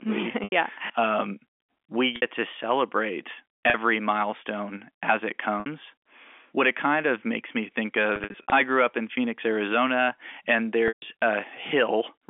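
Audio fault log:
0.44 to 11.02 s, packet loss with pitch repetition: gaps at 0.44 s (80 ms), 2.16 s (60 ms), 3.7 s (40 ms), 5.6 s (60 ms), 8.16 to 8.52 s (200 ms scattered over 360 ms, no run over 60 ms) and 10.88 s (140 ms). The receiver repeats the last pitch period and fades it over about 50 ms. The 40 to 60 ms losses sound like a briefly held, buzzy tone. At 0.44 s and 10.88 s the repetition fades toward silence before the speech cross-fades back in, all within telephone-band G.711 audio.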